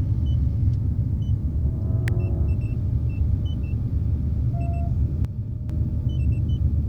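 A sharp snap at 2.08 s sits on top of the sound, an electrical switching spike, likely a nearby switch or discharge arcing into the audio line. From 5.25 to 5.70 s the level falls abruptly by about 6 dB before recovering, as if one channel drops out; the likely cause is a stereo channel vanishing before the mono sum.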